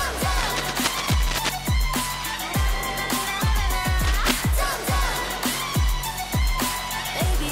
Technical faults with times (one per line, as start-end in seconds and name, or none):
0.38-1.56 cable scratch noise
3.99-4.31 cable scratch noise